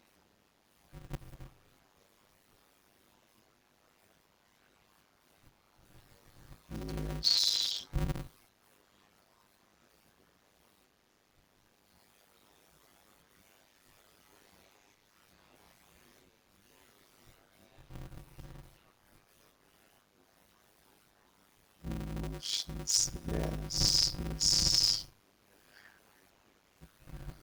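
From start to end the speech carries a steady 100 Hz buzz, the mark of a block size mismatch (padded). Blocks of what sounds like 256 samples are read into larger zero-filled blocks, so delivery slows to 0.533 times normal speed at about the right pitch.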